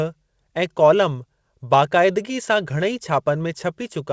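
No technical faults are audible.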